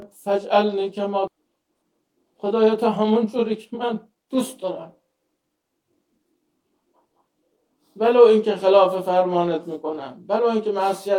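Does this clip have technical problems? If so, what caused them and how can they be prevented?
Yes. There are three faults.

Channel delay (comb filtering) runs through the whole clip. One channel lags the other by roughly 20 ms. When the two are summed to mono, shared content cancels at evenly spaced frequencies, starting near 20 Hz. The sound is rough or slightly doubled. Prevention: align the channels before summing, or send only one channel.

There is a skip ahead at 1.27 s. Roughly a second and a half of audio is gone. Playback jumps forward with no gap in between, so the two sides join almost directly. Queued audio was dropped to catch up. Prevention: size the jitter buffer so late audio is not discarded in bulk.

A jitter buffer speed-up runs from 2.73 to 4.64 s. The buffer held too much audio. The receiver cut many short pitch-period pieces, about 300 ms in total. The sound plays at 117% speed with unchanged pitch and feels hurried. 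Prevention: keep network delay steady so the buffer stays near its target.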